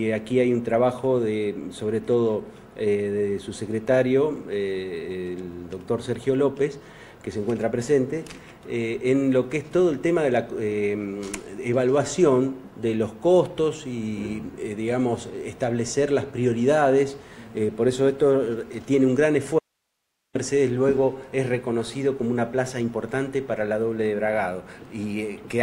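At 19.59 s the sound cuts out abruptly for about 0.76 s, until 20.35 s, an audio dropout to a faint residue. Only hiss remains, roughly 55 dB below the signal, likely because the source was lost while the downstream path stayed live.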